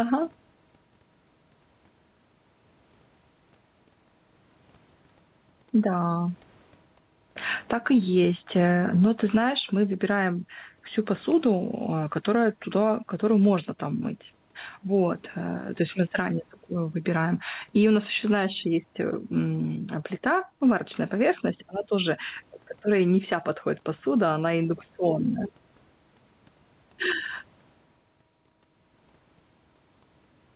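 Speech, carried over a call path whose band stops at 4 kHz, with gain pumping throughout: the input gain was likely set far too high, so a fast limiter clamps down on every loud syllable. The gain swings by around 10 dB, leaving the level flattened and squashed.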